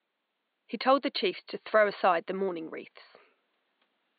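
No technical faults are present in this speech recording; the only other sound is the room's own background noise, sitting about 51 dB below the speech.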